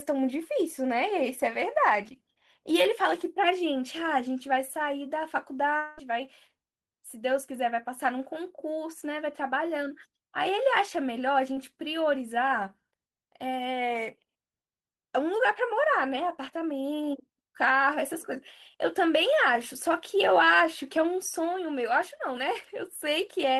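A long network dropout at 5.77 to 5.99 s interrupts this speech clip. For about 0.2 s the last sound before the gap is stretched into a fading buzz or hiss that never drops to true silence. The real audio then resumes further on, and the 200 ms in between is gone for good. This is likely a stretch where no packets arrived at the receiver, so its concealment kept extending the final sound until the stream came back. A short concealed packet loss follows at 11.53 to 11.57 s. Roughly 20 ms of audio missed the decoder, and the receiver patched the hole by carrying the preceding sound forward, following its pitch if voiced or as shaped noise if not, before blending back into the real signal. The result is a brief smear or wobble lasting a couple of hundredths of a second.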